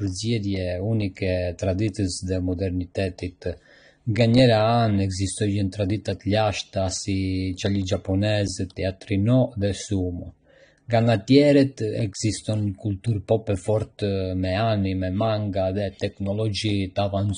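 Speech throughout the clip shows plainly audible AAC compression damage, likely from low-bitrate AAC-LC encoding consistent with about 32 kbps. Nothing remains above 9.7 kHz, so the top end sounds dull, and coarse quantisation leaves a smeared, warbling texture on sustained sounds and sibilants.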